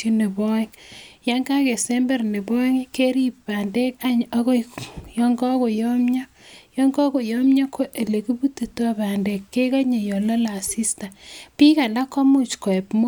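No technical faults detected.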